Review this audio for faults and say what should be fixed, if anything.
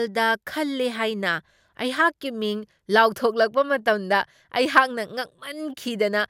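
Nothing needs to be fixed, as no faults turn up in this audio.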